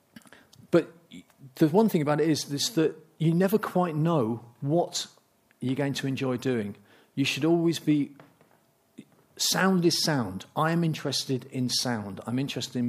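Nothing goes wrong anywhere in this clip, so there's no fault to point to at any moment.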